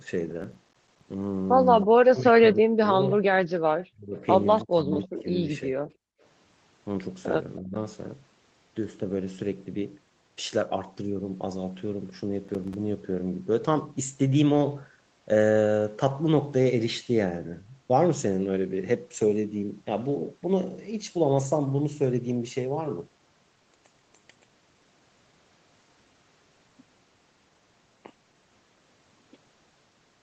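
From 0.42 to 1.01 s there is processor overload crackle. Many processing deadlines were missed in a row, each leaving a short silent gap. The result is gritty tearing that fits buffers of around 5 ms.

From 1.81 to 2.19 s, an echo leak returns a faint copy of the speech 319 ms late, about 25 dB down. The likely cause is an echo canceller that missed part of the loudspeaker sound. Overlapping it, from 1.85 to 3.26 s, the speech dips by up to around 40 dB in patches. This is speech suppressed in double talk, likely from the canceller turning everything down while both sides spoke.

A brief echo scrap follows at 3.80 to 3.86 s, about 30 dB down. From 3.91 to 5.79 s the speech is suppressed again, by up to around 30 dB. Another echo leak runs within it, from 4.60 to 5.21 s, about 25 dB down.

From 6.07 to 6.21 s the background is gated by the echo canceller. The room sound drops by about 34 dB, then returns.

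At 7.60 to 7.75 s a short double-talk dip of around 20 dB occurs.

From 12.45 to 12.74 s there is a second, shorter burst of processor overload crackle.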